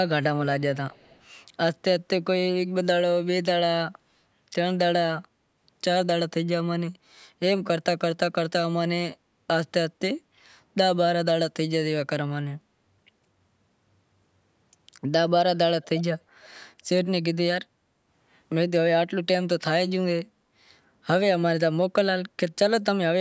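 From 0.90 to 1.23 s a faint delayed copy of the speech trails the original by about 245 ms, sitting far below it and heard only as a ghostly scrap. At 15.82 to 16.02 s it returns much louder, at roughly 15 dB under the speech, lagging by 295 ms. Both are echo leak, likely a far-end loudspeaker feeding its microphone past an incomplete echo canceller, within a band that stops at 8 kHz.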